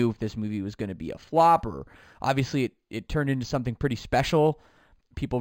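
Throughout the speech, sibilants carry a faint metallic shimmer while the real top end sounds dulled. This is imaging from linear upsampling. The audio was raised by straight-line interpolation, which fits an 11 kHz to 44.1 kHz conversion. That weak filter leaves a mirrored spectrum copy between 5.5 and 11 kHz, roughly 30 dB down.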